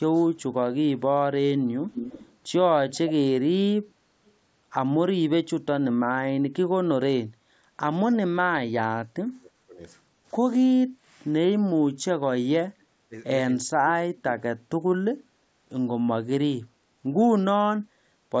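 Echo leak at 0.38–0.42, 1.9–2.37, 3.88–4.32 and 8.11–8.16 s: a copy of the speech trailing by about 0.3 s, loudest near 2 s, likely from incomplete echo cancellation. Speech suppressed in double talk at 8.21–9.8 and 11.99–14.45 s: the talker is turned down by up to about 30–35 dB, likely from the canceller muting overlapping speech.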